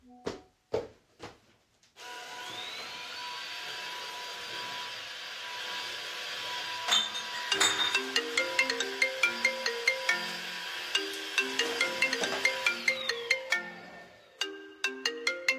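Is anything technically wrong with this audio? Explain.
No, nothing technically wrong can be heard in this audio.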